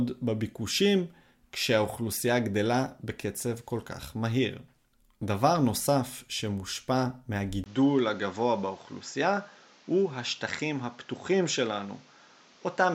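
An input switched to a poorer device at 7.64 s: after a brief gap of about 20 ms, the speech runs to the end with nothing above 7.6 kHz, drops a few decibels in level and gains a new, fairly low noise floor, likely from recording moving to a lesser microphone.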